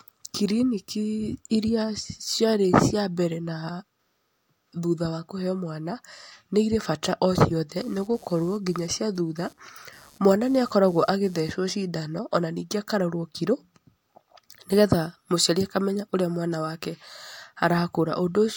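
A speech clip with one fault: computer activity noise from 7.76 s to 11.53 s. It starts just after "nĩ irĩ bata o" and stops just before "cindan ona ningĩ akarorwo". A buzzing, chirping layer pulses at around 150 Hz, roughly 30 dB below the speech. It follows the computer's workload, not the voice. Processor, graphics or mouse activity shifts the ground shared with the audio circuit, and that shifting leaks into the recording.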